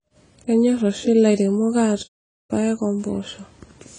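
Across the whole speech clip the sound is dull, with plainly audible codec damage and nothing above 9.9 kHz. This is likely AAC compression, AAC-LC at a low rate that points to about 24 kbps, lowering the cut-off and coarsely quantising the spectrum.

At 2.03 s the speech stops and stays silent until 2.51 s, a gap of about 0.46 s. That silence is likely a playback stall, where the player either ran out of data or had its thread blocked and output nothing until it recovered.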